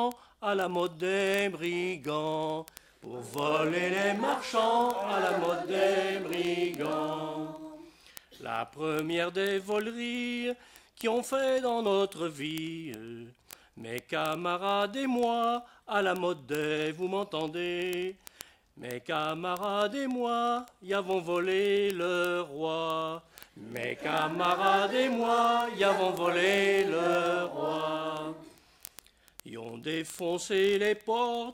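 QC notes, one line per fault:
0.12–31.53 s, word clock ticks: a steady train of sharp ticks roughly every 20 ms, around fifty a second and some fifteen hundred in all. The receiving device is running on its own clock rather than locking to the digital link's sender, with the two rates apart by something like a thousand parts per million. Each time the clocks slip past each other, a few samples are misread and a single sample is dropped or repeated, producing a tick at every slip.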